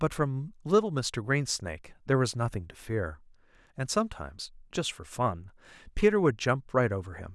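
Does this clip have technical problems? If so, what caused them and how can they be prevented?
No, there are no technical problems in this recording.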